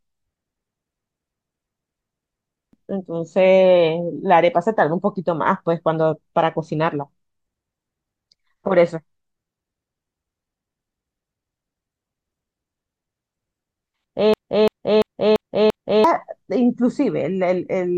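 A speech clip with two system hang loops, from 1.02 to 2.73 s and from 14.34 to 16.04 s. Each time, one 0.34 s slice repeats exactly five times at 2.93 Hz, which fits a 16384-sample ring buffer, and about a second and a half of speech is lost. The identical repeats set it apart from a dropout stutter.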